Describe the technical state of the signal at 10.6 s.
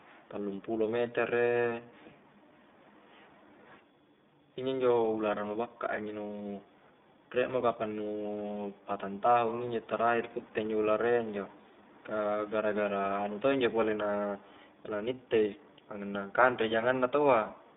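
At 10.6 s the speech sounds thin, band-limited and plainly rough and synthetic, with nothing above 3.7 kHz and little below 200 Hz. This is iLBC codec damage, present throughout. Each 20 ms frame's excitation is coded on its own, and the quality fits the 15.2 kbps mode.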